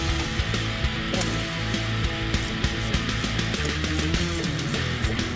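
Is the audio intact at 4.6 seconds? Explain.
Yes, the audio at 4.6 seconds is intact, with nothing interrupting or damaging it beyond the ordinary band limit of the call codec, which leaves nothing above 8 kHz.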